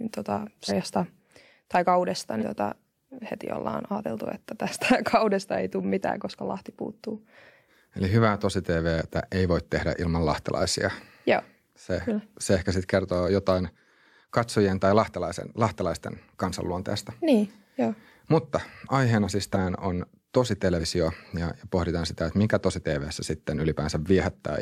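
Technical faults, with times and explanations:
0.68 s, 2.39 s after "tai kaudesta", 19.53 s after "aiheena siis", 20.78 s after "on tosi": compressed frames skipped. The sound jumps ahead roughly 50 to 150 ms, which fits whole frames of about 46 ms going unplayed.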